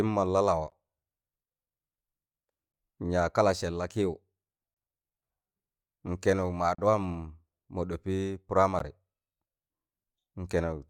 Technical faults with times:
0.70 gap between stream segments
2.72 gap between stream segments
4.74-4.76 gap between stream segments
6.75-6.78 gap between stream segments
8.79 gap between stream segments

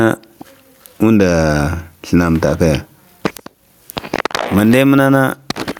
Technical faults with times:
0.00-5.80 gain pumping

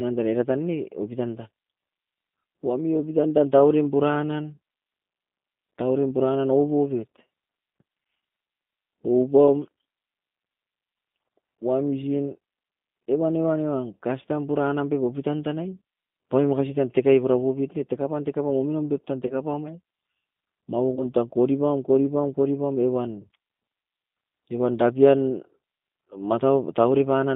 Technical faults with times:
0.00-27.35 G.729 codec
19.27-19.34 VoIP packet loss concealed by the speech codec
20.95-21.04 VoIP packet loss concealed by the speech codec

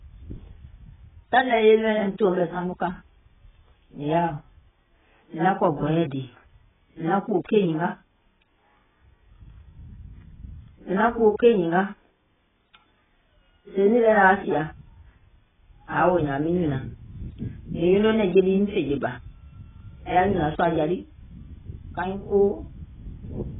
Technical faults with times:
0.00-23.59 AAC compression

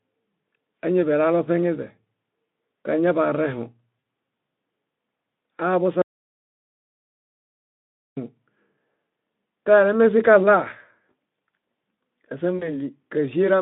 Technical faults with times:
3.99-4.03 VoIP packet loss concealed by the speech codec
6.02-8.17 audio dropout to silence
12.57-12.73 VoIP packet loss concealed by the speech codec

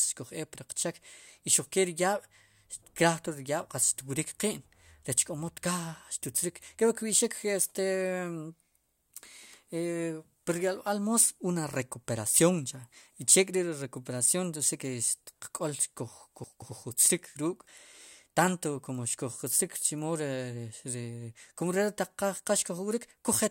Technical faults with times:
16.44-16.68 chunks out of order

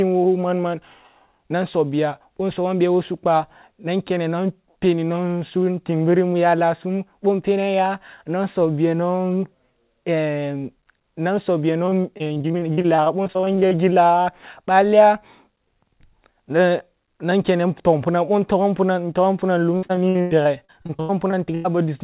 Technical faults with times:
11.86-13.73 repeated packet loss (robotic sound)
19.77-21.66 repeated packet loss (robotic sound)

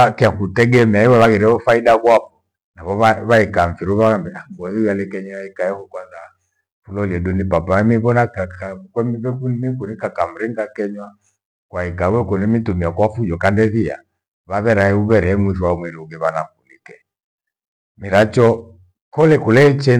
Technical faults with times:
0.00-20.00 hard clipping

